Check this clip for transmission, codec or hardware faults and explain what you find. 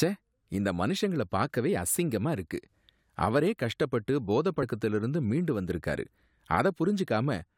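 One fault here: compressed frames skipped at about 4.62 s. The speech jumps ahead by roughly 70 ms, which fits about three of the 21.3 ms frames going missing or being thrown out as damaged by the decoder.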